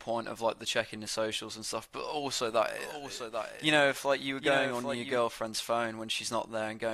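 From about 2.79 s to 5.21 s, the speech is joined by a second, quieter copy of itself, roughly 10 dB down and trailing by about 0.7 s. It carries the full frequency range with no decay or room colour, and it cuts in and out abruptly at those points. This is a doubled audio track. The likely cause is the same signal being captured again through a slower path, or an edit leaving two copies out of step.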